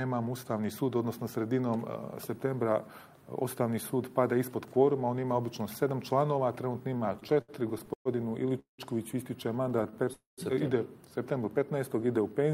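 From 6.97 to 8.08 s there are repeated stalls (stutter): ten short gaps, the longest 120 ms, fill about 27% of the span with continued sound. Packets arrived more slowly than playback, so the jitter buffer kept emptying, and the audio drags without losing content.

At 8.59 to 8.81 s a call audio freeze holds the last sound for 190 ms, fading to 120 ms of silence before resuming where it stopped, likely because delayed packets left the jitter buffer empty.

From 9.69 to 10.10 s the stutter returns with six brief gaps, none over 19 ms, together 78 ms.

At 10.13 to 10.41 s a second freeze inserts 247 ms, with 150 ms of it silent.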